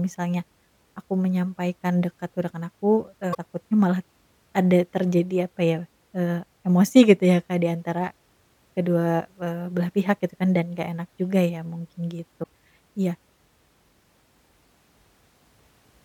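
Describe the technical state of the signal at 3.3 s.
A brief disturbance breaks into the speech from 3.31 to 3.35 s, lasting about 50 ms. This is damaged data in a compressed stream. At that point the encoded bytes are corrupt, so the decoder misreads or rejects the affected frames and loses its alignment with the frame structure. It then scans forward for the next valid frame header and resumes normal decoding there, which is why the disturbance is so short.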